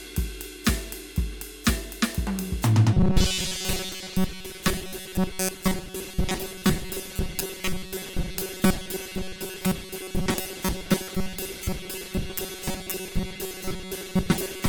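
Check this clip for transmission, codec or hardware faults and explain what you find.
One fault is present, running from 2.94 s to the end of the music: robotic sound from repeated short buffers. The music turns into a rigid, metallic buzz pitched at 188 Hz that only loosely tracks the original. The likely cause is audio arriving too seldom, so a slice of about 5.3 ms is looped in place of most of the real signal, and that repetition rate imposes the fixed pitch.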